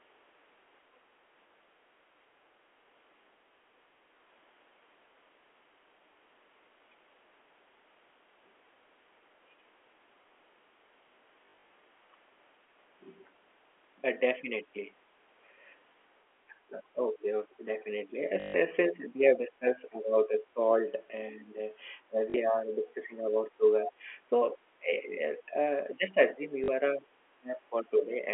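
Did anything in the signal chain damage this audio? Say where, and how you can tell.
Yes. At the network stage there is packet loss with the last packet repeated: lost packets were filled by replaying the previous one, at 1.48–1.50 s, 11.46–11.70 s (scattered, runs up to 40 ms), 18.40–18.54 s, 22.30–22.34 s and 26.64–26.68 s. The brief robotic buzz of the runs fits 20 ms packets.

In call processing, the speech is suppressed in double talk, likely from the echo canceller ducking the near talker while the far side spoke. The speech dips by roughly 10 to 20 dB in pieces at 16.48–18.16 s, 18.83–20.91 s, 21.32–21.60 s, 22.07–23.91 s, 24.26–25.54 s and 25.94–28.27 s.

Also in call processing, the other side's voice is leaking through at 23.86–23.92 s. A scrap of a second voice sits about 15 dB under the speech. The likely cause is incomplete echo cancellation of the loudspeaker signal picked up by the microphone.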